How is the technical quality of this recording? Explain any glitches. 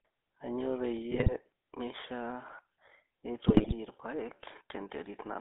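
The technical quality is poor: the recording has passed through a narrowband mobile codec and has two bursts of transmission damage.

Throughout, the GSM full-rate codec limits the band to roughly 300 Hz to 3.6 kHz, consistent with 13 kbps full-rate coding. Its pulse-driven vocal-tract model discards fine excitation detail, leaving a plainly buzzy, gravelly roughness on the speech.

At 1.11–1.33 s and 3.48–3.75 s, GSM bit errors corrupt the decoder's filter, pitch and gain parameters. The spectrum warps and the level jumps frame by frame, heard as squawks, pops and gargling. The second burst is denser.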